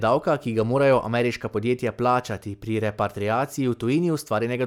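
There are no technical faults to describe in this speech recording.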